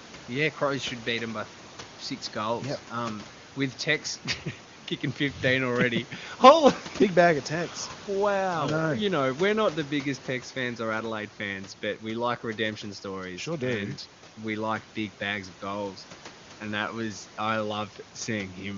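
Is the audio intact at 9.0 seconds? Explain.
Yes, the audio is intact at 9.0 seconds: there is no fault at that moment, only the room noise sitting about 20 dB below the speech and the HD Voice codec carrying the speech clearly.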